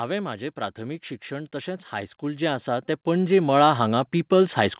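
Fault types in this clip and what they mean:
Automatic gain rising: from 0.54 s to the end, voice and background noise swell together as the gain control, judging the input too quiet, steadily turns it up.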